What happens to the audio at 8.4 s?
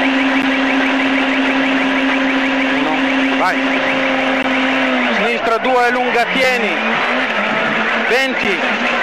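At 8.44 s a gap between stream segments inserts about 9 ms of hard-edged silence; unlike a dropout, no audio is lost, and the sound resumes exactly where it stopped.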